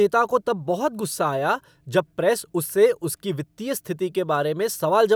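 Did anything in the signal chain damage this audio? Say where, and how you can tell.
No, nothing in the signal chain has damaged this speech recording. Listening through it, there is no point where any stage from capture to playback leaves an audible mark.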